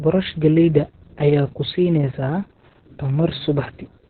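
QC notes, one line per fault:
Throughout: Opus voice compression, SILK narrowband coding with nothing above 4.4 kHz and heavily coarse excitation, leaving muffled, hoarse, slightly robotic speech that points to roughly 6 kbps.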